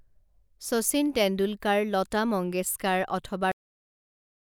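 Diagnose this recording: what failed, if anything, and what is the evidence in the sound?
The speech suffers a cut-off end at the buffer or storage stage. Right after "মংগেশকাৰ অথবা", at 3.52 s, the sound stops mid-utterance and drops straight to digital silence, with no decay. The final buffers were never written, so the remaining audio is simply missing.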